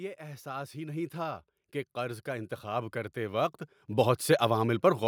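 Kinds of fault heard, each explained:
Automatic gain rising: an automatic gain control judged the input too quiet and kept raising its gain, so the speech and the noise floor swell together by about 11 dB from 0.17 to 3.61 s. The waveform envelope climbs steadily, and the spectrogram brightens evenly.
Sudden gain jump: at 3.88 s the speech and background step up together by about 6 dB and stay there. The likely cause is a digital gain change applied without a ramp. The waveform shows an abrupt amplitude step, and the spectrogram a sharp vertical brightness edge.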